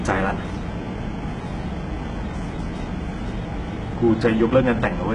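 From start to finish the speech has bright but synthetic treble, with gritty, metallic s sounds and nothing above 11 kHz. The likely cause is heavy HE-AAC compression at what sounds like about 12 kbps, with upper bands copied from lower ones rather than coded.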